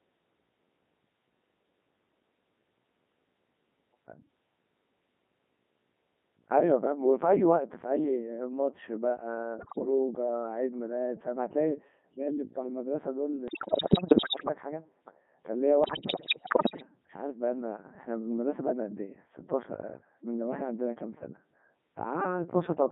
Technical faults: Codec 2 vocoder; bit errors on digital voice radio

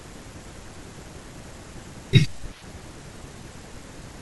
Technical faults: none

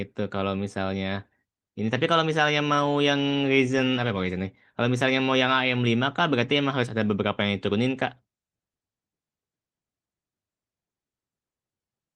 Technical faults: none

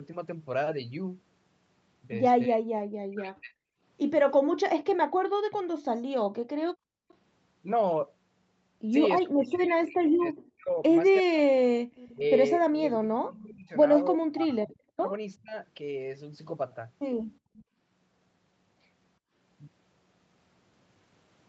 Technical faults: speech suppressed in double talk; background gated by the echo canceller; echo leak

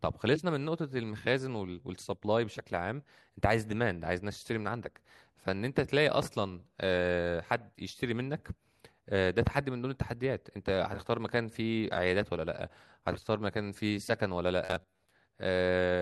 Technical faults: robotic sound from repeated short buffers

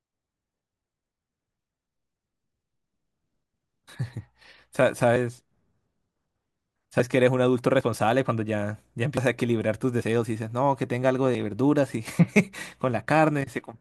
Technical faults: dropped buffer (overrun)

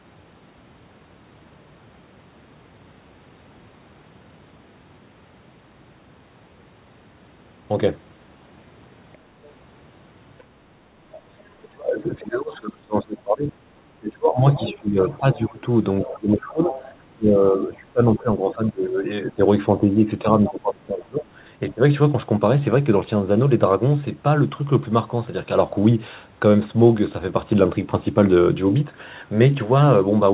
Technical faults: other side's voice leaking through; speech suppressed in double talk

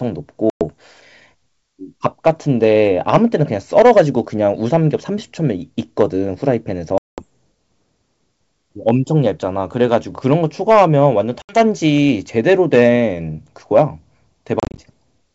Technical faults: packet loss on an ADPCM call

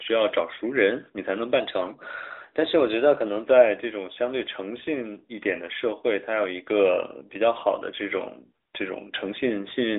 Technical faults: drift correction step

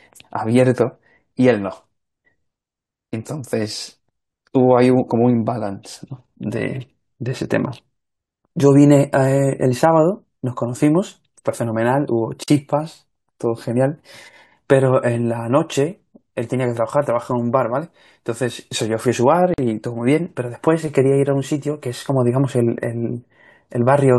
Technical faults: gap at a join of encoded pieces

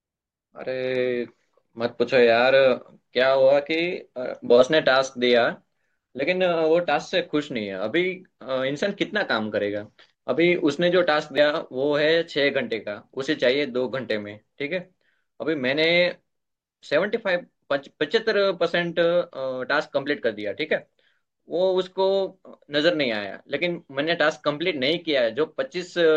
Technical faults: damaged data in a compressed stream

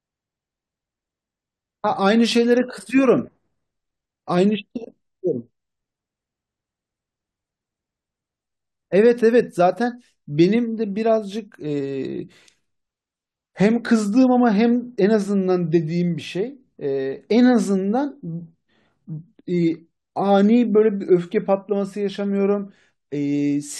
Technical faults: none

